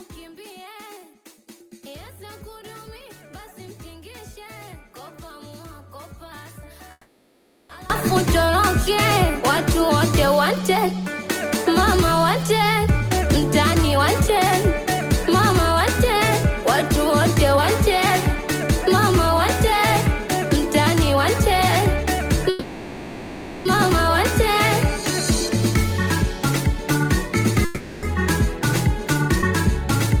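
From the start until 7.9 s the level sits about 22 dB low, leaving only a faint copy of the sound. That's likely one channel inverted, so the shared centre content cancels when the two sides are summed to mono.

From 6.91 to 7.71 s there's a call audio freeze: the last sound is stretched into a fading buzz, with a tiny 20 ms dropout, for about 780 ms. The likely cause is late packets draining the jitter buffer. Playback then resumes where it stopped, with nothing lost.

From 12.86 to 24.10 s a jitter buffer speed-up runs things about 3% fast at unchanged pitch. The receiver trims tiny pitch-period slices, about a third of a second in total, to work off the built-up delay.

Inside that stretch, from 22.49 to 23.67 s, another freeze holds the sound as a decaying buzz for about 1.16 s. That's likely the same starved buffer, and the audio picks up again without losing anything.

From 26.23 to 29.23 s a second, milder speed-up runs about 2% fast. 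It only shaves off a small fraction of a second.

From 27.65 to 28.05 s a short freeze of about 380 ms stretches the sound out in the same way, again likely from a late packet burst.

At 29.42 to 29.45 s there's a skip ahead. Roughly half a second of audio is dropped and the two sides are butted together almost directly, so playback abruptly jumps forward.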